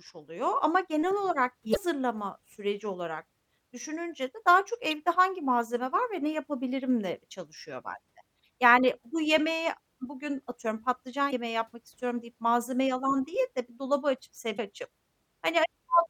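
Speech, with four short bursts of damaged data in a compressed stream at 1.71–1.77, 4.90–4.93, 11.27–11.33 and 14.54–14.60 s. Each is a quick glitch where corrupted bytes threw the decoder off its frames until it resynced on the next good header.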